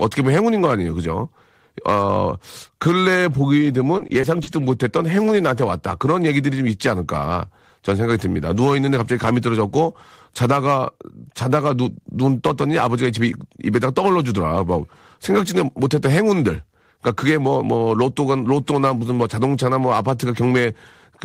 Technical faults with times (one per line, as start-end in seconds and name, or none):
3.97-4.49 repeated packet loss (robotic sound)